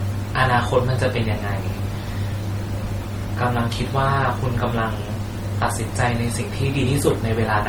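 It's a speech clip with two problems running the whole way through. First, there's a grainy, gritty distortion that rides along with the speech rather than sitting underneath it as a steady hiss. The quietest stretches get rough or sputter between steps instead of fading smoothly. The error sits only about 25 dB below the signal, which points to low bit depth without dither, likely something like 7-bit rounding. Because no dither was added, the error tracks the speech and stays audible as distortion. Second, there's a mix of different lossy artefacts stacked on top of each other and heard together. That sounds like transcoding between lossy codecs, with the later codec spending its limited bits re-encoding the earlier codec's damage. It fits an MP3 pass around 48 kbit/s followed by Opus around 24 kbit/s. Nothing comes through above 20.1 kHz.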